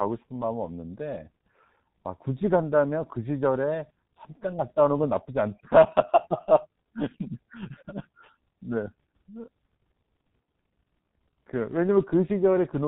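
Throughout the recording, the speech has passed through the G.723.1 codec, a very low-rate telephony coder that discards everything above 4 kHz and rebuilds the voice from a coarse, slowly updated model. The damage is heavy: muffled, hoarse speech with smeared consonants, consistent with roughly 6.3 kbit/s.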